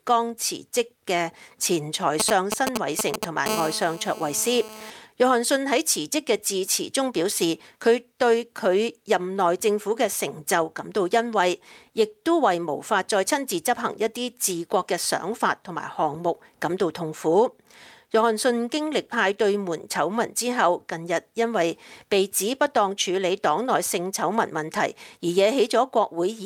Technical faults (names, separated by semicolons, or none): GSM signalling bursts; GSM phone buzz